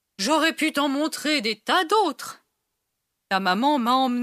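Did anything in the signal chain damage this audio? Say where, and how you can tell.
No, nothing in the signal chain audibly damages this speech at any stage from capture to playback.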